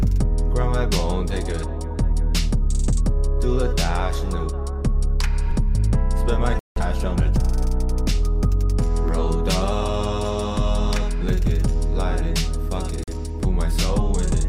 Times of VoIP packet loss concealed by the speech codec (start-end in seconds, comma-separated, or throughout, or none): none